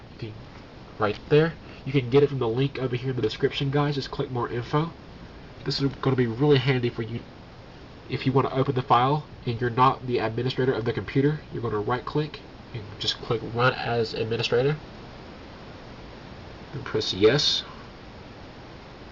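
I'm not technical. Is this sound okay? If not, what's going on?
No. At 7.17 to 7.19 seconds there is a skip ahead. About three quarters of a second of sound never plays. Playback jumps straight forward, and the two sides are joined with almost no gap, so the sound seems to lurch.

Right after, from 7.27 to 8.97 seconds, comes a jitter buffer speed-up. Too much sound had piled up waiting. The player trimmed many tiny slices to catch up, running about 8% fast. The pitch stays the same, but it sounds hurried.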